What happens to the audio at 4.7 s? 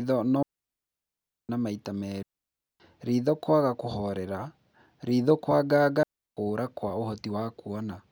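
Nothing goes wrong at 4.7 s; the speech there is intact, with no dropout, click, distortion or other fault.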